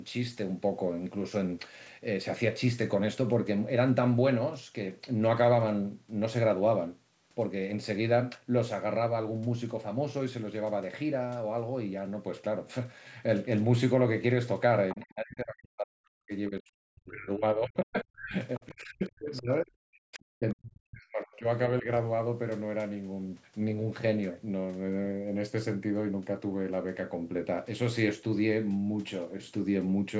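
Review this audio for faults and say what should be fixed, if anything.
At 14.90 to 14.96 s there is a brief burst of the other side's voice leaking through, around 15 dB below the main speech. The far-end audio was likely played on the talker's loudspeaker, picked up by the microphone, and not fully removed by the echo canceller. On a spectrogram it appears as a thin, faint patch of harmonics just before the speech level collapses. On the waveform it is a small, ragged bump of low amplitude. A headset, or an echo canceller with better-converged filters, would prevent it.

From 14.95 to 21.88 s the speech is suppressed in double talk in four stretches: 14.95 to 16.33 s, 16.49 to 18.35 s, and 18.59 to 21.46 s, each dropping by roughly 40 dB at its deepest, then a shallow dip of roughly 10 dB at 21.81 to 21.88 s. The likely cause is the echo canceller turning both sides down because it could not tell the talker from the echo while the other side spoke. 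The waveform shows the envelope pinched to near silence in chunks, and the spectrogram shows gaps and missing upper harmonics. A canceller with proper double-talk detection, rather than blunt gain suppression, would keep the talker's level intact.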